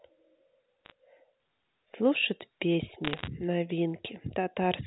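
Bit errors on the digital phone line produce sharp ticking crackle from 0.85 to 0.92 s, and more densely from 3.05 to 3.28 s. Each flipped bit corrupts one sample, showing as a lone spike on the waveform and a thin vertical broadband line on a spectrogram.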